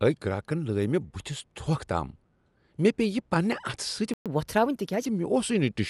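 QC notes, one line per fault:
throughout: Dolby Digital compression. The speech sounds dull and band-limited, and a rough, fluttering noise clings to voiced tones. This is likely a low-bitrate AC-3 style encode, which fits a stream near 64 kbps: the encoder trims the top of the band and starves many frequency lines of mantissa bits, so the decoder fills them with dither noise. A spectrogram shows a lowered band ceiling and speckled noise between harmonics.
4.14–4.26 s: playback stall. The audio stops dead mid-flow for 120 ms, then resumes where it left off. This is likely a player running out of buffered data or being blocked, so output falls silent until data arrives again. On the waveform it appears as a flat gap of silence with abrupt edges, and on a spectrogram as a clean vertical blank band across all frequencies.
4.26–5.06 s: catch-up at higher speed. Right after the gap, the speech runs 1.15 times fast for 0.8 s, with pitch raised by roughly two semitones, then settles back to normal. 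The player is resampling its backlog to recover the lost time, so speed and pitch rise together. A spectrogram shows harmonics shifted upward and syllables compressed in time over that stretch, returning to their normal spacing at about 5.06 s.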